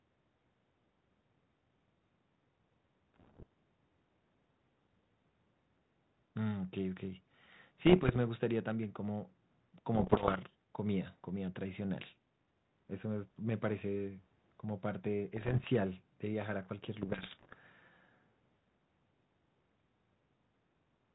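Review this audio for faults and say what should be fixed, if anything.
Bit errors on an ADPCM link cause rough, popping bursts with brief level jumps at 3.14–3.43, 7.86–8.17, 9.95–10.38, 15.36–15.68 and 17.02–17.54 s, from around one flipped bit in a hundred on the 32 kbit/s G.726 stream. Each flipped bit knocks the decoder's step size and predictor off track, so the damage rings on briefly. Packet loss would instead leave gaps or smoothed-over concealment. Fix it by improving the radio link or adding error protection to the ADPCM channel.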